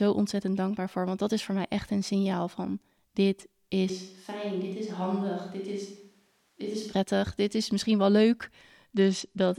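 A switch to a distant microphone runs from 3.9 to 6.92 s, after "een signaal van dit" until "dit is misschien wel". The speech turns suddenly roomy and thin, about 5 dB quieter, with faint room noise, likely because the close microphone dropped out.

A Bluetooth SBC bit pool drop follows at 8.95 to 9.59 s, after "is misschien wel leuk". The treble dulls and grit appears, which fits the bit pool falling from 31 to 12, near 88 kbps.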